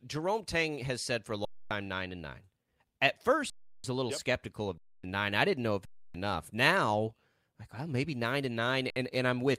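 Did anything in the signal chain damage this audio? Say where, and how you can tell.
Yes: underrun with held sample, at the driver or output-buffer stage, at 1.45–1.71 s, 3.50–3.84 s, 4.78–5.04 s, 5.85–6.14 s and 8.90–8.96 s. The speech stops dead with hardly a click because the buffer ran empty and the converter froze on its last sample, leaving a flat waveform. Gaps run 256 to 341 ms, and 58 ms last. Roughly 300 ms of live speech (about 50 ms last) is lost.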